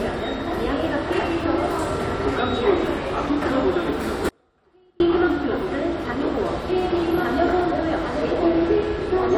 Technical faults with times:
4.29-5.00 audio dropout to a faint residue

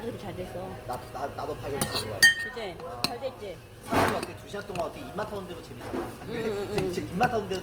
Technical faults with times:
0.00-7.63 Opus compression

